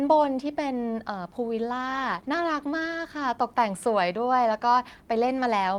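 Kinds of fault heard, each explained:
Call bitrate drop: From 1.86 s to 3.07 s the speech turns coarse and rough. The call's bandwidth estimate fell, so the encoder was told to spend far fewer bits on the signal. With fewer bits, it codes the sound with less detail. The change fits a fall from 32 kbps to 18 kbps. The roughest stretch lasts about 1.1 s. Clarity returns at 3.07 s, once the bitrate recovers.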